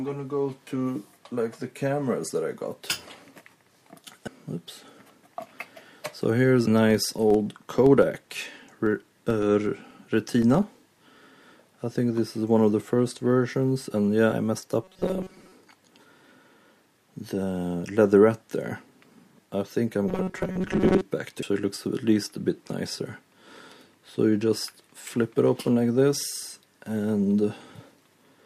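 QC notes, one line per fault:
4.27 s, 6.67 s and 21.42 s: compressed frames skipped. At each point the sound jumps forward: about half a second is lost at 4.27 s, about a fifth of a second at 6.67 s and roughly 0.4 s at 21.42 s. The jumps are consistent with whole 32 ms frames going missing or being rejected by the decoder. On a waveform, the envelope shows an abrupt discontinuity. A spectrogram shows a brief vertical smear where the content changes suddenly.
6.90 s to 11.64 s: filter restarted on every block. A steady 25 Hz tick or buzz runs under the sound. This fits a filter that loses its state and restarts from silence every 40 ms. Each block then opens with a small transient, and the ticks grow louder as the sound gets louder. A waveform shows small evenly spaced bumps at 40 ms intervals. A spectrogram shows faint vertical lines at the same spacing, more visible in loud passages.
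14.84 s to 15.53 s and 20.08 s to 21.02 s: robotic sound from repeated short buffers. The sound becomes a stiff metallic buzz fixed at 188 Hz, though it still loosely follows the original contour. The likely cause is audio arriving too slowly, with a segment of about 5.3 ms replayed to fill the gaps, so most of the real audio in these spans is skipped. A spectrogram shows rigid horizontal harmonics at multiples of 188 Hz. A waveform shows an identical short cycle repeating.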